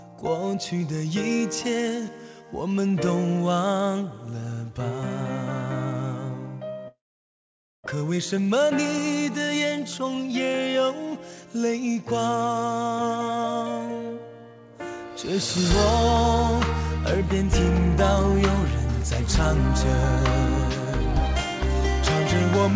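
At 6.88 s the sound gives way to a short buzzy tail that fades, then near silence until about 7.88 s. That's most likely a long network dropout: the receiver papered over the gap, and roughly 0.6 s of audio never came back.

From 7.95 to 11.07 s, through the G.722 call path that tops out at 8 kHz, things run about 111% speed at unchanged pitch. That's a jitter buffer speed-up, trimming tiny pitch-period slices to claw back around 0.4 s of built-up delay, so it feels hurried.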